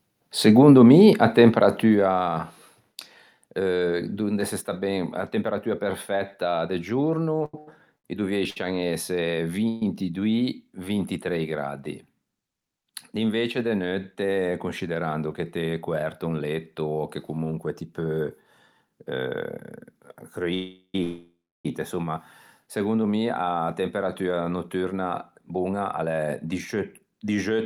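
A speech recording with four kinds of fault. Zipper noise runs from 1.49 to 2.43 s, just after "mi a": the level falls around 10 dB in 1 dB steps at about 20 per second, with no smoothing, so a fine ticking rides on the voice. The waveform envelope shows a staircase, and the spectrogram shows faint vertical click lines at each step. Repeated stalls (stutter) occur between 7.45 and 8.57 s. Packets arriving late kept emptying the jitter buffer, and four gaps, the longest 86 ms and about 290 ms in total, were filled by extending the last sound. Nothing is lost, but the speech drags and stutters, and the spectrogram shows smeared, repeated stretches. Call audio freezes occur at 9.68 to 9.82 s (133 ms), 20.54 to 20.95 s (399 ms, ending just before "insomma segondo mi a") and 21.03 to 21.66 s (616 ms). The likely cause is held-up packets draining the jitter buffer. Each freeze holds the last sound as a fading buzz, and the two longer ones drop into silence for 80 ms and 300 ms. 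These show as flat horizontal bands, then blank columns, before speech resumes where it stopped. A jitter buffer speed-up follows "segondo mi a temperatua" from 24.75 to 27.64 s. The receiver trimmed about a third of a second in small pitch-period pieces to reduce the backlog, so the speech runs at about 109% speed with the same pitch. The spectrogram shows syllables packed closer together, with harmonics unchanged.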